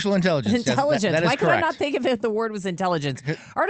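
Nothing goes wrong anywhere in this speech clip; it just comes through the Opus call link with the top end trimmed around 8 kHz, as that path does, and there's nothing to flag.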